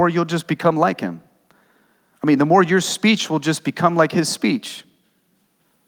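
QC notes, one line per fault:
Nothing stood out on listening to this speech recording.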